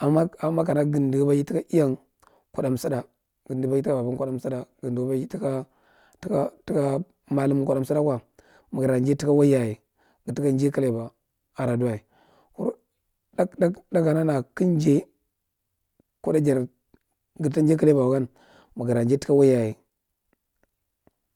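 No dropouts, clicks, distortion or timing errors turn up anywhere in the recording, so there is nothing to log.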